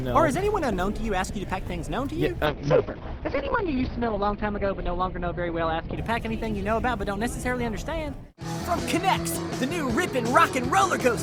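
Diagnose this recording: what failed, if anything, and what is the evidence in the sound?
From 2.46 s to 7.27 s the sound turns muffled and rough, with a watery, coarse texture that is worst for about 1.25 s before clearing. The top end collapses from a full band reaching 20 kHz to one ending near 6 kHz. This is a call bitrate drop at the codec stage. The bandwidth estimate fell, so the encoder coded far more coarsely and trimmed the highs, which fits a fall from about 48 kbps to roughly 7 kbps.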